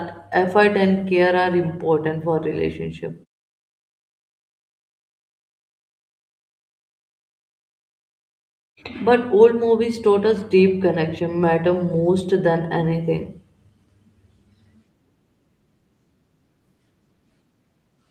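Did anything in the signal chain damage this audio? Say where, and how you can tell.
No, nothing in the signal chain has damaged this speech recording. In the pauses the background fades to silence and returns in time for each next phrase, so no speech is lost.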